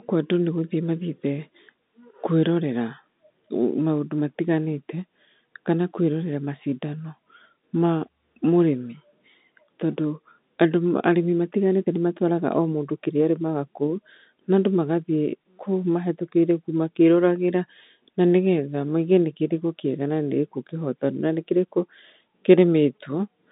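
No technical faults are audible.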